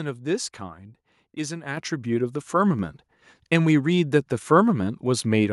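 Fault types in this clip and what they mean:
Microphone volume stepped up at 1.77 s: the input level of the microphone was raised in a single jump of about 7 dB, likely by the call software judging the speech too quiet, so the voice and background noise become louder together mid-clip.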